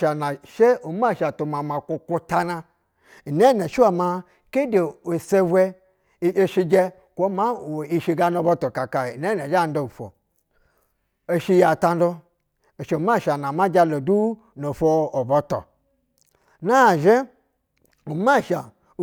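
No technical faults are audible.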